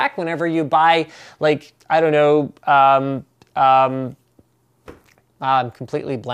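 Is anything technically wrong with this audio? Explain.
No, nothing technically wrong can be heard anywhere in this audio.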